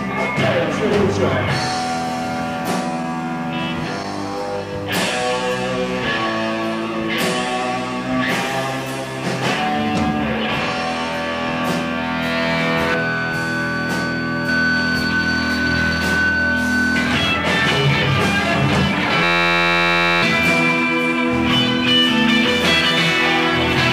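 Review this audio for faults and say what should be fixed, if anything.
A system hang loop, 19.24 to 20.23 s: the host froze while the hardware replayed one 11.61 ms buffer (fits 512 samples), a steady 86.1 Hz buzz replacing about a second of audio. To prevent it, run the audio thread at real-time priority with a watchdog that mutes output when the buffer stops being refilled.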